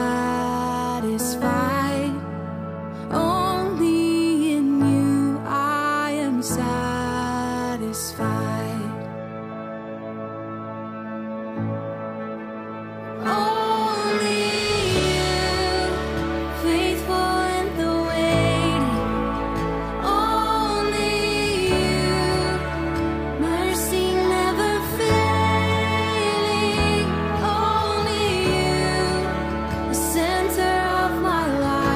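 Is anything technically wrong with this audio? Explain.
Yes, there are two sharp clicks, at 16.92 s and 21.84 s. They're most likely dropped samples: well under a millisecond of the stream goes missing, so the waveform jumps abruptly to a later value. Nothing audible is lost, just a single tick each time, showing as a thin vertical line in the spectrum.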